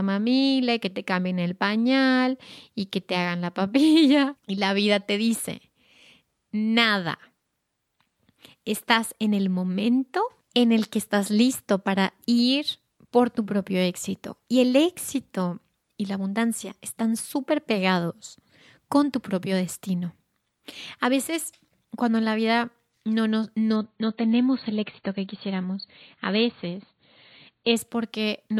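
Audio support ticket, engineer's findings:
Adaptive stream at a lower bitrate, 23.76 to 27.76 s, right after "la vida no no". The speech goes dull and swirly with nothing above about 4.6 kHz, then snaps back with no gap. Sounds like the player dropped to a much lower-bitrate MP3 rendition for four seconds when the connection slowed.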